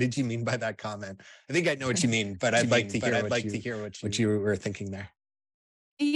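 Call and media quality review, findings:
Doubled audio track, 2.57 to 4.21 s, between "what you mean but" and "were thinking there". Full-band copy trails by roughly 0.7 s, a few dB below the original, dry with no room colour, abrupt onset and cutoff. Likely cause: second capture via slower path or misaligned edit holding two copies.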